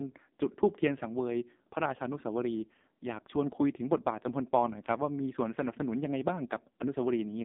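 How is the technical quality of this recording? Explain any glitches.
The quality is poor, because the whole recording carries AMR narrowband mobile codec damage. It runs from start to finish. The band sits between 200 Hz and 3.7 kHz, with nothing above. The speech sounds buzzy and synthetic, which fits a very low bitrate near 5.9 kbps.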